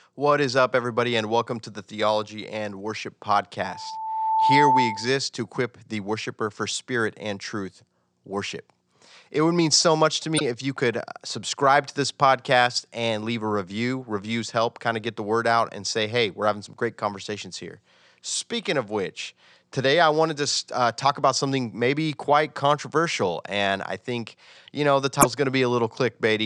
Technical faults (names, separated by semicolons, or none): loudspeaker feedback squeal; damaged data in a compressed stream